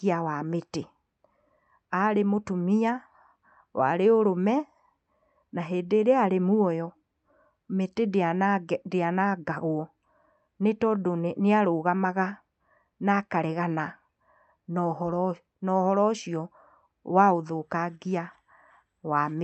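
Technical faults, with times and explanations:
No technical faults can be heard in this speech. It comes through a call path whose codec keeps the top end to around 8 kHz, with the usual coding noise that fits a moderate Opus bitrate.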